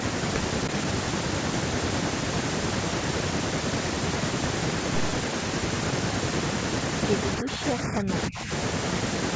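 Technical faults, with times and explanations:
7.41 to 8.11 s and 8.28 to 8.51 s, speech suppressed in double talk: the speech drops in patches, by up to about 20 dB and then about 15 dB, likely because an echo canceller could not separate the local talker from overlapping far-end echo and turned both down. On a spectrogram, the energy thins. The waveform envelope shows dips.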